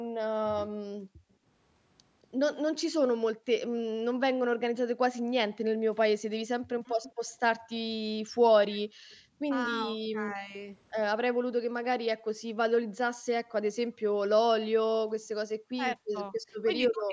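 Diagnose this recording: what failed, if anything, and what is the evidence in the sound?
Call processing, echo canceller: background gated by the echo canceller. The room sound drops out, by about 40 dB at its deepest, at 0.04–0.17 s, 0.96–1.45 s, 8.89–9.37 s and 11.26–11.37 s. The canceller clamps the microphone path while far-end audio plays, then releases it.

Call processing, echo canceller: speech suppressed in double talk. The speech dips at 6.68–7.06 s (roughly 40 dB), 9.65–10.54 s (roughly 10 dB) and from 15.7 s to the end (roughly 40 dB). The likely cause is the canceller failing to separate near-end speech from loudspeaker echo and attenuating both. The upper limit near 8 kHz comes from the call's microphone processing.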